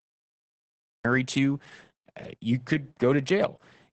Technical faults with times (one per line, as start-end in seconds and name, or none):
0.00-3.92 Opus voice compression
0.00-1.05 cut-off start